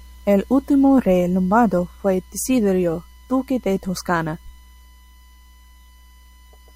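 A thin, steady whistle at 1 kHz sits under the speech from start to finish, faint at roughly 40 dB below the speech, holding one fixed pitch. This is USB whine: the USB bus pulls current in bursts once every millisecond, and that 1 kHz rhythm couples into the audio through a shared power or ground path, turning the bus's own timing into an audible tone.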